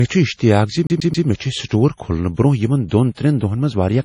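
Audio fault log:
throughout, MP3 compression: the sound is watery and swirly, with a dull top that stops dead near 10.5 kHz. The cause is likely a heavily starved MP3 encoder, consistent with a bitrate near 32 kbps. It drops the treble at a fixed cut-off and lets quiet frequency lines blink on and off between frames, so sibilants chirp metallically and attacks smear. Unlike a plain low-pass filter, the band-limited sound warbles.
0.87–1.27 s, CD stuck on one turn: a rapid, perfectly even stutter as the same 133 ms slice plays three times, each restart preceded by a brief mute. This is the laser jumping back one track at the same scratch on every revolution, so the slice length stays fixed by the disc's rotation. Unlike a network dropout or buffer glitch, the repeats are identical in length and rhythm.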